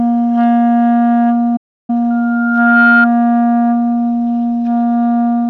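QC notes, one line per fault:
1.56–1.90 s, playback stall: the sound halts abruptly for about 0.32 s, leaving dead silence, then carries on. The likely cause is the player starving for data or its thread being blocked.
2.10–3.07 s, loudspeaker feedback squeal: a single 1.4 kHz tone rises out of the sound, swelling over roughly 0.7 s to sit a few dB above it. A microphone is re-amplifying its own loudspeaker at that frequency. The self-reinforcing swell sets it apart from a steady interfering tone.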